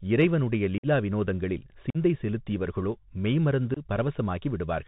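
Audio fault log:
throughout Bluetooth CVSD headset codec: The link carries the speech as one-bit up/down steps with an adapting step size, which fits a 64 kbps CVSD stream. Nothing above 4 kHz survives, s sounds turn scratchy, loud bright peaks outrun the step and distort, and granular hiss sits underneath.
0.78–0.86 s, 1.90–1.97 s, 3.74–3.79 s unconcealed Bluetooth headset packet loss: Runs of voice packets between headset and phone went missing and were filled with silence or an idle pattern rather than patched over, leaving holes of about 52, 45 and 22 ms. Their edges are abrupt, and the speech returns briefly quieter as the codec recovers.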